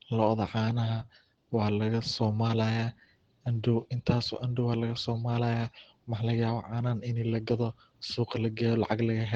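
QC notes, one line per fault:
Throughout: Opus voice compression. The speech sounds plainly hoarse and slightly robotic, with a coarse, grainy texture. This fits Opus hybrid mode near 16 kbps: the lower band is linear-prediction coded with a coarsely quantised excitation, and only a thin layer covers content above 8 kHz.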